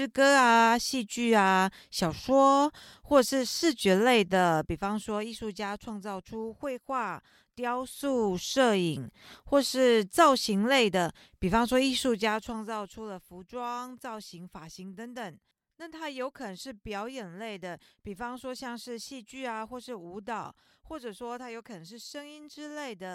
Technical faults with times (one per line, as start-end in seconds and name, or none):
4.18-5.62 zipper noise